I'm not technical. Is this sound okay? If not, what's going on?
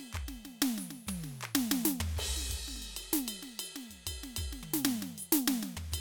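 Yes, nothing wrong can be heard anywhere in this music.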